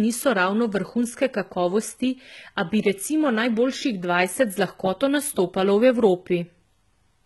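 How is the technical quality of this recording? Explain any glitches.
The recording is heavily compressed throughout, and the treble is partly synthetic.

HE-AAC compression, likely the cause, runs the whole clip. The encoder keeps only the lower spectrum and rebuilds the top by copying lower bands upward under a coarse envelope, which fits a very low bitrate around 16 kbps. The copied treble doesn't align with the real harmonics, so s sounds come out gritty, metallic or lispy, and nothing remains above 11.8 kHz.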